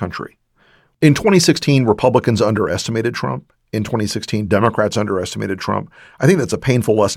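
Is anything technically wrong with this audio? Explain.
No, the speech signal shows no technical faults anywhere in the recording.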